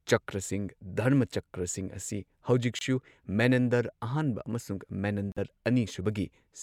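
Corrupt frame muted at 2.79–2.82 s and 5.29–5.38 s: damaged compressed frames were rejected and replaced with silence, leaving abrupt holes, the second spanning several frames, with timing intact.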